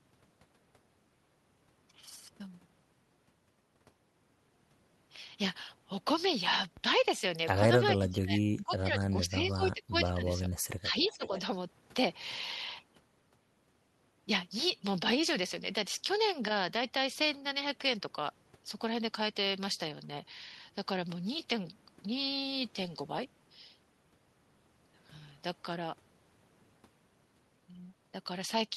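From 7.98 to 10.51 s the talker dips by up to about 20 dB, then again briefly at 10.8 to 11.31 s by about 15 dB, likely speech suppressed in double talk as the canceller ducks both sides. Overlapping that, 11.03 to 11.4 s carries a faint copy roughly 20 dB down and 488 ms late, likely an echo leak through a loudspeaker.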